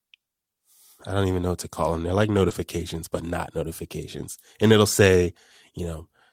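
At 2.49 s, just before "but not notifications", about 20 ms of the call failed to reach the decoder in time, a short concealed packet loss. The receiver covered roughly 11 ms of that hole by extending the preceding sound, heard as a brief smear or wobble before the audio resumes.

From 2.51 to 2.53 s, a lost packet rebuilt from error correction fills the rest of that gap. The low-bitrate copy carried in the following packet stood in for it, which fits a single lost packet. These 20 ms play without a dropout but sound rougher and noisier.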